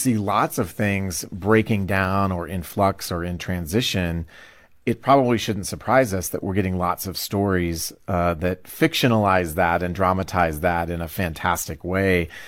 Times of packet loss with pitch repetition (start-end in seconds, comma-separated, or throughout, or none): none